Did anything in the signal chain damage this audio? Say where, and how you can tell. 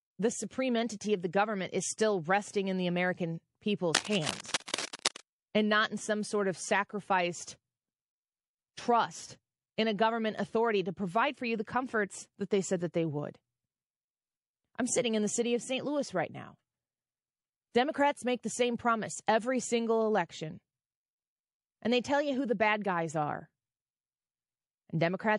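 Yes. At the codec stage, the speech sounds watery throughout. This is likely MP3 compression at a low bitrate, which fits around 48 kbps.

Pre-echo precedes attacks at 0.49, 4.65, 4.74, 8.74, 9.77 and 17.71 s. Brief hiss, up to 37 ms long and about 22 dB up, smears each onset. This suggests long transform blocks without switching.

From 3.94 to 5.20 s, rough scratching sits almost as loud as the speech. This points to analogue wiring, likely cable scratch noise from a worn cable or connector being moved.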